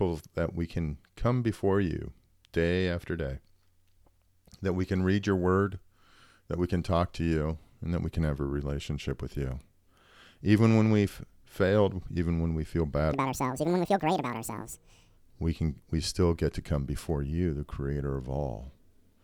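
A playback or editing stage likely ran this passage against the wrong clock, producing a section at the wrong speed from 13.13 to 15.17 s. The speech runs 1.86 times too fast and jumps around ten semitones higher, sounding hurried and chipmunk-like.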